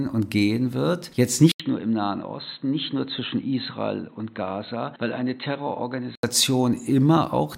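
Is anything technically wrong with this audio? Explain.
Yes. At 1.52 s an 80 ms silence opens a boxy stretch lasting until 6.23 s. It stops at 4.1 kHz and is about 5 dB quieter. The likely cause is an input switched to a poorer, narrower-band device.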